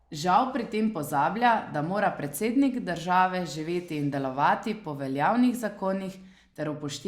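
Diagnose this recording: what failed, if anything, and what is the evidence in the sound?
Nothing failed; no fault is audible in the speech.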